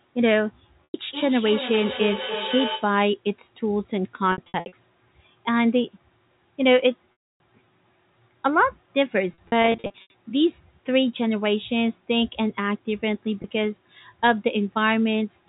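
Telephone speech, carried through G.711 A-law at its 4 kHz band limit, with packet loss with pitch repetition. The receiver bridges each gap by repeating the last pitch period. Short holes sound like a brief buzzy hold. Longer ones fade out. Gaps fall at 0.85–0.94 s, 4.32–4.72 s, 7.12–7.40 s, 9.34–10.14 s and 13.42–13.44 s. The 4.32 s and 9.34 s stretches are scattered dropouts. From 1.1 to 3.0 s there is feedback echo between two devices. A second device in the room replays the call, and its microphone sends it back. Each phrase returns roughly every third of a second, thinner and ringing, peaking about 8 dB below the speech.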